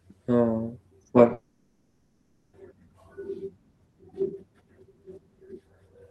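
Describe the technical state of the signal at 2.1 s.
At 2.1 s the audio sits inside a gap from 1.33 to 2.55 s, likely a long network dropout. For about 1.2 s nothing new arrives. The receiver stretches the last sound into a fading buzz-like fill instead of silence. That stretch of speech is lost when the audio resumes.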